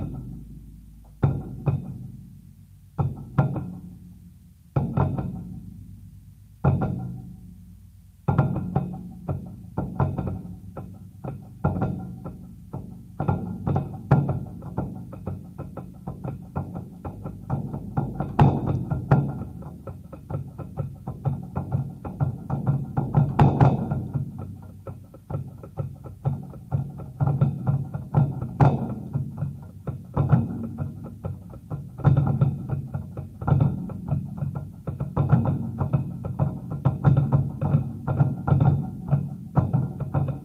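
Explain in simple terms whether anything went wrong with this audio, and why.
Nothing went wrong with this audio, because no technical fault can be heard anywhere in these sounds.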